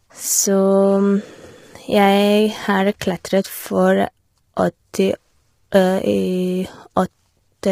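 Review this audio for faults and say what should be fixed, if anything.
The speech sounds rough and grainy the whole way through, with noise filling the gaps between harmonics and a thin, synthetic-sounding top end. That's likely heavy low-delay AAC compression, AAC-ELD, at a bitrate around 24 kbps, where its short frames can't resolve pitch detail well. To avoid it, give the call codec more bitrate or switch to a codec mode with longer frames when low delay isn't critical.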